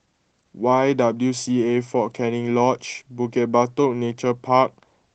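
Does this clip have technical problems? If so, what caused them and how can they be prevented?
No, the speech arrives intact over a WebRTC call path working as intended, with its high end stopping around 8 kHz, which fits an Opus stream at about 20 kbps, so there is nothing here to trace to a cause or prevent.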